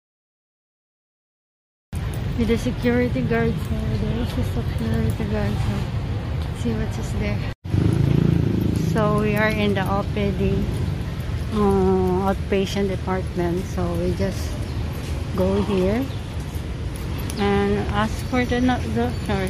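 Capture or streaming began late, producing a cut-off start: the audio holds digital silence from 0 to 1.93 s, then enters abruptly partway through a sound at 1.93 s, with no natural attack or fade-in, so the opening arrives already in progress.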